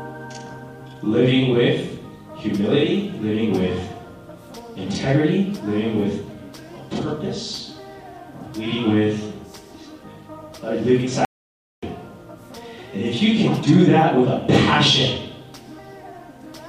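At 11.25 s the sound cuts off abruptly and returns at 11.83 s: an audio dropout to silence lasting about 0.58 s. The gap holds silence, with no room tone or noise floor, so the input was likely lost briefly while recording carried on writing zeros. Whatever occurred in that stretch is missing. On a waveform it shows as a near-flat line between sharp edges; a spectrogram shows a blank vertical band.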